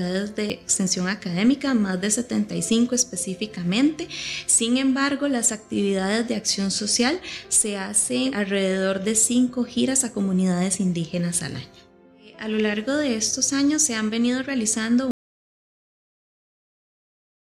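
Audio dropout to silence at 15.11 s: the sound cuts off into pure silence, with no room tone, through to the end, likely from a lost input.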